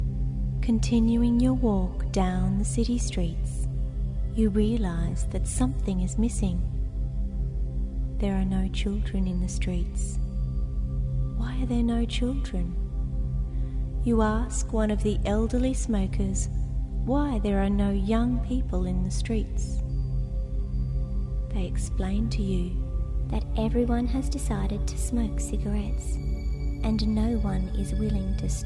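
From 23.31 s onward, the sound runs 1.09 times fast, 1.47 semitones sharp. This is a wrong sample rate, fitting 22 kHz audio played at 24 kHz.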